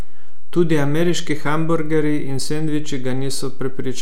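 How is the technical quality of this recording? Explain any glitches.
The speech carries a DC offset throughout. The waveform sits shifted from zero by about -15 dBFS. You don't hear it directly. It wastes headroom and adds steady energy at 0 Hz.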